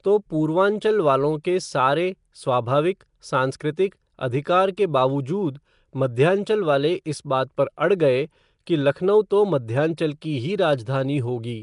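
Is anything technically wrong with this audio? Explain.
Yes. Throughout the speech there is a rough, hissy halo and a smeared, underwater colour, with nothing at all above 10.6 kHz. This is likely Nellymoser compression. That codec works on short blocks with a fixed, small bit budget, so weak frequency bands get no bits and are filled with shaped noise instead of signal. Ordinary low-bitrate MP3 loses detail without this constant noisy fizz standing in for the missing bands. The damage is plainly audible.

Pre-echo occurs at 1.44, 3.6, 7.57, 8.66 and 9.97 s. At each of these points a short hiss of about 10 ms comes just before a sharp attack, and the attack itself sounds softened. The block-based coding spreads noise sized for the loud onset evenly across the whole block, including the quiet moment before it. Unlike a true echo or reverb tail, the smear leads the sound rather than trailing after it.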